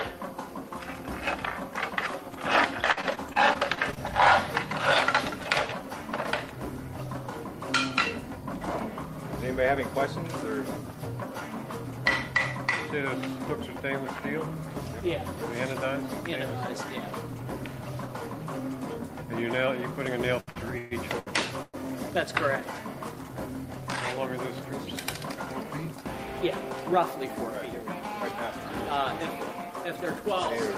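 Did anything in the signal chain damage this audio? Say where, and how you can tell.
Yes, three network-stage problems. Repeated packet loss (robotic sound) runs from 2.91 to 3.98 s: eight gaps, longest 55 ms, patched by stretching the last sound, so it turns choppy, with about 120 ms genuinely gone.

Repeated stalls (stutter) hit between 20.40 and 21.76 s. Five times the jitter buffer ran dry, longest wait 134 ms, and the receiver held the last sound until packets caught up. Nothing's lost, but it drags and stutters.

Then a jitter buffer speed-up from 25.35 to 27.55 s: the buffer was overfull, so the receiver trimmed out short pitch-period chunks, roughly a tenth of a second in total. Playback runs about 4% fast at unchanged pitch.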